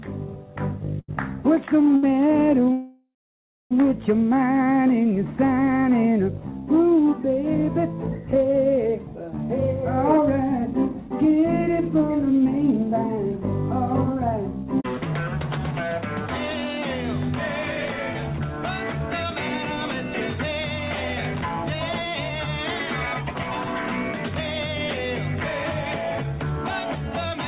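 At 1.0 s and again at 1.96 s there is a short stall from a late packet: the jitter buffer ran dry and the receiver held the last sound for about 83 ms and then 62 ms, giving a brief stretched sound with a slight buzz or dip before the audio resumes with nothing lost.

From 2.72 s to 3.74 s comes a call audio freeze. The last sound continues as a fading buzz or hiss and then drops to silence for roughly 0.58 s, with about 0.99 s of gap in total. The cause is likely packets held up in transit emptying the jitter buffer, and the audio picks up exactly where it stopped.

Three jitter buffer speed-ups follow, at 9.48 to 15.74 s, 18.44 to 24.60 s and 25.49 to 27.39 s. The receiver trimmed short pitch-period pieces to shed excess buffered delay, about 0.4 s, 0.4 s and 0.15 s respectively. The audio runs 6 to 7 percent fast at unchanged pitch and sounds hurried. Throughout, the call path keeps the audio band-limited, with nothing above 4 kHz.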